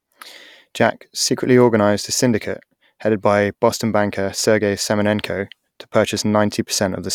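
No technical faults can be heard anywhere in it.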